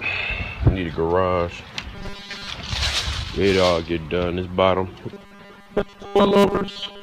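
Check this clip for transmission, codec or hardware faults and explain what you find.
Two stretches of robotic sound from repeated short buffers, at 1.95 to 2.49 s and 5.13 s to the end. The likely cause is late-arriving audio patched by looping about 5 ms chunks, replacing roughly two-thirds of the signal with a rigid, metallic 200 Hz buzz. A spectrogram shows even 200 Hz harmonic stripes, and the waveform shows identical repeating cycles.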